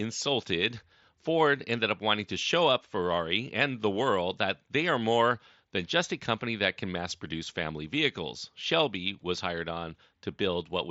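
No technical faults can be heard: the speech comes over a wideband Bluetooth headset link using the mSBC codec, which carries it up to about 8 kHz with only a light grainy texture on the louder sounds and some faint flicker in the weakest upper bands.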